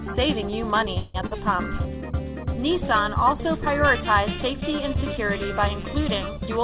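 From 0.98 to 1.16 s there is a call audio freeze. The last sound drones on and fades for about 163 ms, likely because delayed packets emptied the jitter buffer. At 1.26 to 1.33 s comes short concealed packet loss. About 40 ms never arrived, and the receiver's 43 ms patch sounds like a brief smear. From 6.46 s to the end is a jitter buffer speed-up. Small pitch-period slices, roughly 40 ms in total, are cut, so the sound runs at 115% speed without a pitch change. Everything sits below 4 kHz, which fits a 64 kbps G.711 A-law call path.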